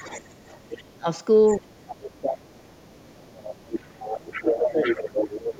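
Other side's voice leaking through runs under this speech clip from 0.0 to 0.82 s, 1.5 to 1.91 s, 2.55 to 3.15 s and from 3.48 s to the end. The far talker's loudspeaker sound, likely left over by an echo canceller that didn't fully remove it, sits well below the speech early on and rises to roughly 10 dB under it in the final stretch. Speech suppressed in double talk hits at 0.68 to 1.07 s, 1.59 to 2.52 s, 3.16 to 3.75 s and 4.38 to 4.85 s. The near voice dips by as much as roughly 30 dB, and by a milder 15 dB or so in the last instance, while the far side plays on the loudspeaker, likely because the canceller couldn't tell the two apart and turned both down.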